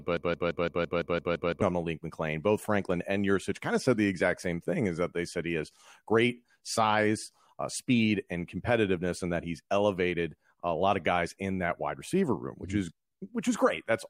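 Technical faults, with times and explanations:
0.00–1.62 s: broken-record loop, already running as the clip opens. A 169 ms fragment repeats exactly nine times back to back, likely a stalled stream resending its last piece; waveform and spectrogram show identical blocks tiling at 169 ms, and the intended speech is lost.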